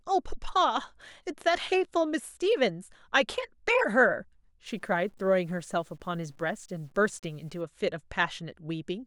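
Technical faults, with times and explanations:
4.66–7.61 s: low bit depth without dither, likely from undithered truncation near 9 bits, adds signal-following error roughly 40 dB down, so quiet speech turns grainy.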